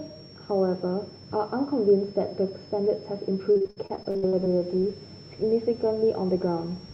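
A switching supply whistle runs under the speech for the whole clip. It sits between 5.2 and 5.6 kHz, wandering within that band. It stays well below the speech, roughly 25 dB down. A power supply cycling in an audible burst mode produces this kind of tone.

From 3.51 to 4.55 s there is repeated packet loss, heard as robotic sound. About a dozen short holes follow each other closely, the longest 60 ms. Each is patched by stretching the previous sound. Around 40% of that stretch is filled in, so the speech turns choppy.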